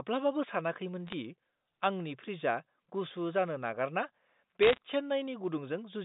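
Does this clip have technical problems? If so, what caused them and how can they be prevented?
Yes. Bit errors on a digital phone line cause brief crackle at 1.07 to 1.14 s and heavier crackle at 4.62 to 4.78 s. Each flipped bit corrupts a single sample, so the speech underneath continues intact, unlike packet-loss gaps. Error-checked transmission or a cleaner line prevents it.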